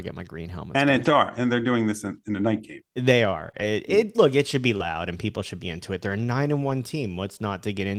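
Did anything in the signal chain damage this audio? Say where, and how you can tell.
Yes, network packet loss repaired by Opus in-band forward error correction. Lost packets were rebuilt from low-bitrate copies at 1.01–1.15 s, 3.39–3.49 s, 3.55–3.65 s, 4.79 s and 6.69 s. There is no gap, but those stretches sound rougher and noisier, and the spectrogram shows coarser, grainier harmonics.

Short concealed packet loss, also on the network side, occurs at 3.51–3.55 s and 4.77–4.81 s. About 20 ms never arrived, and the decoder extended the preceding sound to fill it. You hear a brief smear or wobble. The waveform shows the preceding sound carried on, then blending back into the real signal.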